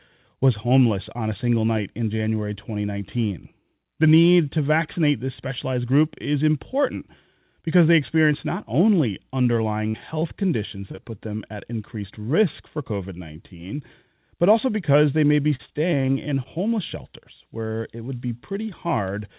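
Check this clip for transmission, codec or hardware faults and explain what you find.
Three kinds of packet-loss fault appear in this speech clip, carried over a narrowband call path whose band stops at 4 kHz, which points to G.711 mu-law.

Short concealed packet loss at 9.44–9.47, 10.20–10.23, 10.91–10.95 and 10.95–10.99 s: about 20 ms each went missing and was bridged by extending the preceding sound, heard as brief smears or wobbles.

A burst of packet loss at 9.89–9.96 s: about 40 ms was lost, and the concealment stretched the last sound into a fading buzz or hiss before the speech resumed further on.

Repeated packet loss (robotic sound) from 15.55 to 16.47 s: six gaps, the longest 36 ms, with about 14% of the stretch synthesised. The repeated patching makes the speech choppy, with pieces missing.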